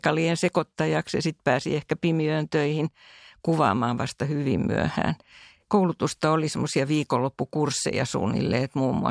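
There are no technical faults to describe at any point in this speech recording.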